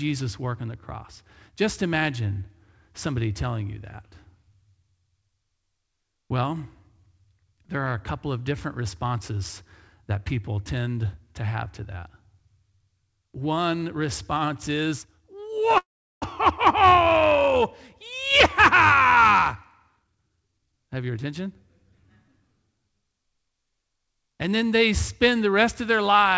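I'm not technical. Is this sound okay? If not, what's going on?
No. From 15.78 to 16.24 s the sound stalls: a short fading buzz, then almost 0.4 s of silence, before it carries on where it left off with nothing lost. This is a call audio freeze, likely caused by data arriving late so the receiver briefly ran out of sound to play.

Right after, from 18.12 to 19.56 s and again from 19.97 to 21.47 s, the speech sounds rushed but keeps its normal pitch, slightly at first (about 7% faster), then clearly (about 20% faster). This is a jitter buffer speed-up: after the delay, the receiver snipped out tiny slices of audio, roughly a tenth of a second and then three tenths of a second in total, to catch up.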